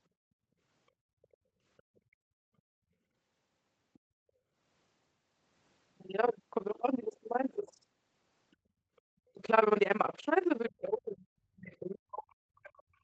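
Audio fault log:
Throughout: overlap-add ripple. The level swings up and down by about 60 dB at roughly 20 times a second, a rough, robotic flutter. Framed audio was rebuilt with windows whose overlap does not add to a steady gain, so every frame pulses.
1.38 to 1.65 s: background gated by the echo canceller. The room sound falls away by about 21 dB for around a third of a second, then comes back. While the loudspeaker played, the canceller clamped the microphone hard and released it afterwards.
1.78 to 2.0 s, 3.94 to 3.99 s, 8.51 to 8.56 s and 8.96 to 9.01 s: other side's voice leaking through. Faint scraps of a second voice sit well under the talker, around 35 to 40 dB down. They are likely loudspeaker sound the echo canceller failed to remove.
7.63 to 7.67 s and 10.69 s to the end: speech suppressed in double talk. The talker's level dips briefly by a few dB at 7.63 s. From 10.69 s it sinks by as much as about 40 dB until the clip ends. 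Likely both sides spoke together, and the canceller turned everything down.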